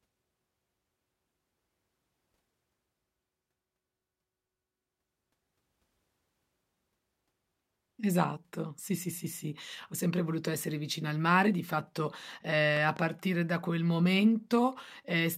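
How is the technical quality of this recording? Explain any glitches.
A pair of sharp pops breaks into the speech near the end. From 12.77 to 12.99 s there is a loud pop, heard as two quick thumps a few decibels above the speech, which carries on underneath. The likely cause is a sudden voltage pulse from a plug, switch, static or driver glitch, shaped by the downstream circuitry into these brief double thumps.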